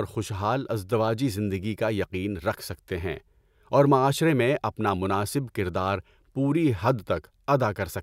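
Listening to this speech recording, nothing stood out as a technical problem anywhere in it.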